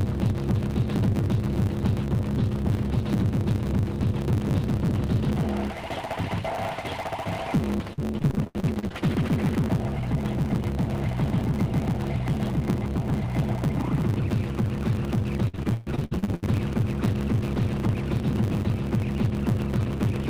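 A block size mismatch (truncated) runs through the whole clip. One stage writes longer blocks than the next one reads, so each block loses its tail. That leaves a steady 100 Hz buzz, and the audio plays 1.09 times too fast at roughly normal pitch.

Repeated packet loss (robotic sound) hits from 7.93 to 8.92 s. Packets keep going missing, and each hole is filled by stretching the last sound. About 42% of that span is patched, with gaps up to 90 ms. The sound turns choppy.

Repeated packet loss returns from 15.48 to 16.44 s, and it is worse there. Close to half of the span is concealed, and the longest gap reaches 136 ms. The audio stutters, with pieces missing. Throughout, the call codec adds its coding noise, with a cut-off at 12 kHz that fits Opus at about 32 kbps.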